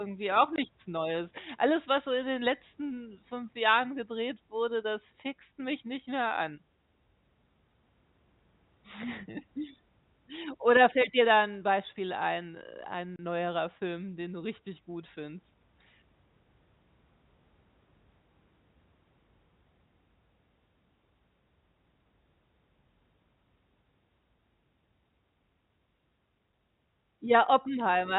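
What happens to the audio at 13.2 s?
At 13.16 s, just after "ein äh", the audio drops out for 30 ms, to 13.19 s. That is packet loss filled with silence: packets never arrived and the receiver played silence in their place, and the length fits three 10 ms packets. The gap has hard edges. On a waveform it shows as a flat line between abrupt cuts, and on a spectrogram as a narrow blank vertical band.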